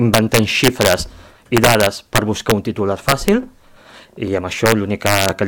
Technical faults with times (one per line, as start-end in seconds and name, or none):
0.14-0.94 integer overflow
1.57-2.51 integer overflow
3.09-3.28 integer overflow
4.66-5.29 integer overflow